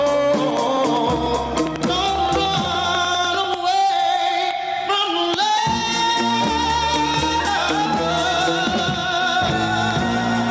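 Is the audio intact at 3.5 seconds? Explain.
No. At 3.5 seconds the clip is near the end of a run of periodic USB or driver dropouts lasting from 0.57 to 3.54 s. Every 0.1 s a stall skips about a millisecond of audio, giving regular ticks heard only while sound is present. That sets it apart from random glitches or from interference clicks that continue through silence.

Gain pumping is also present at that moment, as it is throughout the clip. The likely cause is input gain set far too high, with a fast limiter pulling it down by about 10 dB on each loud sound. Loud and soft parts end up closer in level and the sound is squashed, unlike a noise gate, which would cut the gaps to silence.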